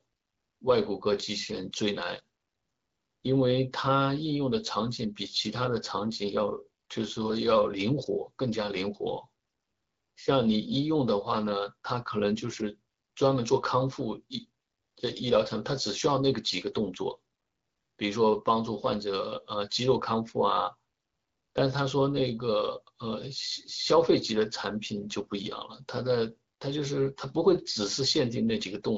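No technical faults are audible.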